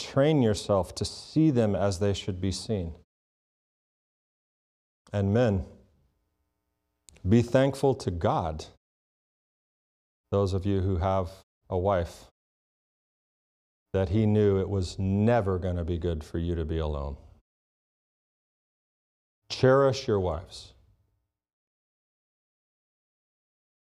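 No faults are audible in this speech clip.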